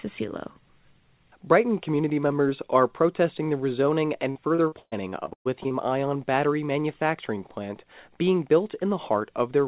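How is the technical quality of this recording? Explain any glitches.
The recording has a clear glitch: a burst of repeated packet loss (robotic sound) between 4.3 and 5.72 s, after "are protesting the rezoning" and before "ion battery manufacturing plant". About ten gaps open up in quick succession, the longest around 120 ms. Each gap is filled by stretching the previous sound, so roughly a third of the stretch is synthetic. It sounds choppy. A spectrogram shows smeared, repeated frames broken by missing slices, and the waveform shows uneven, stuttering blocks. Across the whole clip, nothing appears above 4 kHz, which fits a narrowband telephone codec such as G.711 mu-law.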